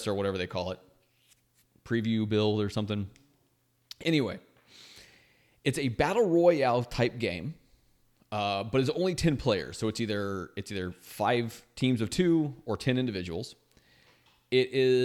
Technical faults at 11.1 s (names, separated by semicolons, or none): none